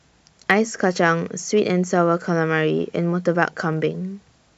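The stream most likely lost a tiny run of samples, a fraction of a millisecond each time, at 0.51 s, 1.48 s and 3.73 s. With those dropped samples missing, the waveform leaps straight from one value to a later one instead of moving smoothly. No sound is lost. Each gap is far too short to hear as a gap, but every jump comes through as a single sharp click over the speech, a thin vertical streak in the spectrum.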